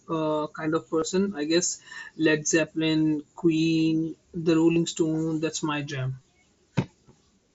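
Brief buzzy, steady-level patches interrupt the speech three times, each ending in a slight warble as the real signal resumes: a 22.5 ms gap at 0.99–1.02 s, a 30 ms gap at 4.73–4.76 s, and scattered dropouts at 6.17–6.24 s totalling 37.5 ms, the longest run 22.5 ms. This is concealed Bluetooth headset packet loss. Voice packets from the headset went missing, and the phone filled each hole by repeating the best-matching stretch of the preceding waveform. The speech itself is carried on the wideband mSBC link.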